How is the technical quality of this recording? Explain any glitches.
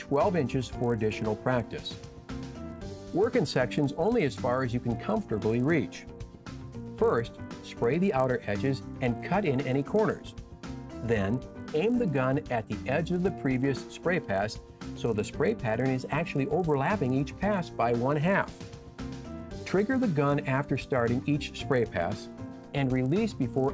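The recording has one fault, present for its whole length: a buzz rides on the sound wherever there is signal. It comes from the resampler restarting on every block. The buzz points to a conversion from 24 kHz down to 16 kHz done in 20 ms blocks, each handled alone. At every block edge the converter lacks the real neighbouring samples, so a small error lands there. These errors repeat at 50 Hz and merge into a low buzz. It drops out in silence.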